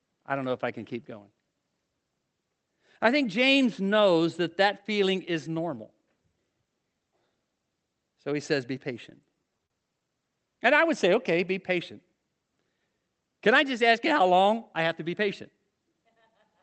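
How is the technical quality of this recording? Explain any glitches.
The speech comes through an Opus call path, which audibly tops out around 8 kHz. There's one glitch, repeated stalls (stutter), between 9.10 and 10.09 s. Ten short hitches add up to about 116 ms, the longest 37 ms. Packets arrived late and the jitter buffer kept running dry, so the receiver stretched the last sound to bridge each wait. Nothing's lost, but that second drags and stutters.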